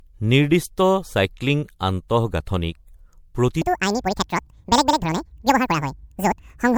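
Throughout, generation loss from repeated lossy re-encoding, likely around seven MP3 passes near 96 kbit/s, leaves the speech swirly, hollow and smeared, with blurred attacks. From 3.62 s to the end, a wrong clock likely doubled the playback speed, so this section at the wrong speed sounds hurried and roughly ten semitones higher.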